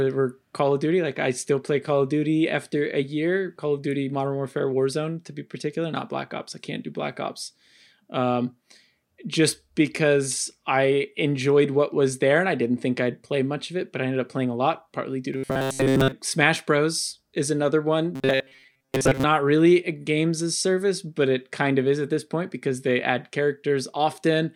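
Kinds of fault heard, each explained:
Robotic sound from repeated short buffers: twice the speech collapses into a stiff, metallic buzz pitched at 133 Hz, from 15.34 to 16.12 s right after "a lot partly due", and from 18.16 to 19.25 s between "is another" and "really a games as". The likely cause is audio arriving too slowly, so a tiny chunk of about 7.5 ms gets looped in place of most of the real signal, and that loop rate sets the fixed pitch.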